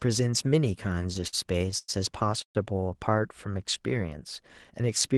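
From 0.83 to 1.90 s the speech drags and hiccups through about a dozen brief stalls, the longest near 0.1 s: repeated stalls (stutter), where late packets kept emptying the jitter buffer. At 2.42 s the sound holds and fades to roughly 0.1 s of silence before resuming at 2.57 s, a call audio freeze, likely from packets delayed in transit.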